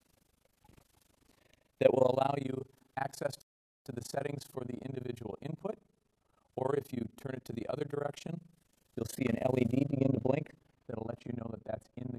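Right from the start there's overlap-add ripple running the whole way through. The audio was chopped into windowed frames and stitched back together with an overlap that doesn't add up to a steady gain, so the level swings once per frame, around 30 times a second. The dips go deep, about 60 dB, so it's close to gating on and off. That gives the sound a fast, rough flutter.

Then at 9.84 s, and on to the end, de-emphasis gets applied wrongly on top of that. A treble cut meant to undo a pre-emphasis boost has gone onto audio that never had one, or it's been applied a second time. The top end rolls off smoothly and is down about 14 dB at 10 kHz relative to 1 kHz. That last stretch sounds noticeably duller and muffled, like a blanket dropped over it.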